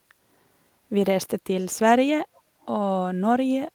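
A speech recording with brief echo leak at 1.59 to 1.79 s, 2.35 to 2.41 s and 2.61 to 2.66 s: faint scraps of the voice return about 298 ms late, each quieter than the last. The likely cause is a far-end speakerphone whose echo canceller let some of its microphone pickup through. Unlike room reverberation, which smears every syllable continuously, these are separate copies at one fixed lag.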